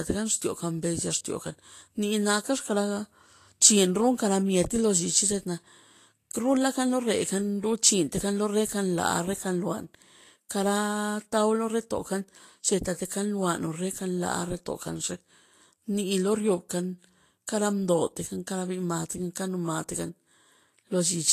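Speech with likely Vorbis compression throughout: nothing above 14.2 kHz, and treble detail turned into grainy hiss rather than MP3-style swirling, which fits a bitrate near 35 kbps.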